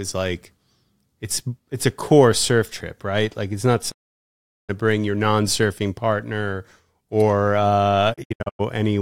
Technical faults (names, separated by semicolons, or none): digital broadcast dropout